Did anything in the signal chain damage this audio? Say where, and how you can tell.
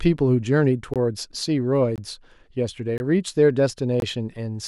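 Yes. There is a gap between chunks at the playback or storage stage: four hard-edged silent holes of about 21 ms each, at 0.94, 1.96, 2.98 and 4.00 s, one per second. No sound is lost; the holes fall at the joins between 1 s chunks.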